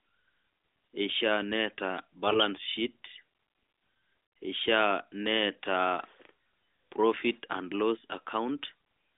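Speech over an AMR narrowband mobile codec, so it's band-limited to roughly 250 Hz to 3.6 kHz with only light codec colouring. The real problem is a burst of AMR bit errors from 2.26 to 2.45 s. Pitch and level hold roughly steady, but the sound turns hoarse and gargly for that stretch, which fits about eight corrupted 20 ms frames with a few percent of the weakly protected bits flipped, so pulse positions and the fine gain and spectrum values land wrong.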